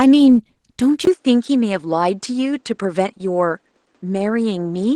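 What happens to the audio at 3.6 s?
The speech sounds hoarse and slightly robotic here, as it does through the whole clip: Opus voice compression at 16 kbps in hybrid mode codes the excitation coarsely. At 3.6 s the sound is also duller and about 5 dB quieter, with nothing above 9.6 kHz and a faint new noise floor far below the speech. This has held since a 20 ms gap at 1.05 s and lasts to the end, likely because the input switched to a poorer device.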